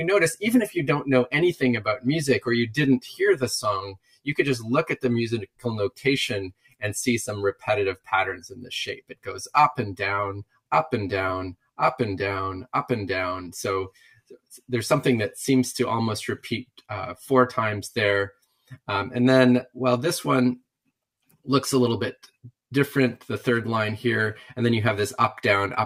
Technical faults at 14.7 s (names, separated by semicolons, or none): noise suppressor applied to music or sounds; sound cut by the noise suppressor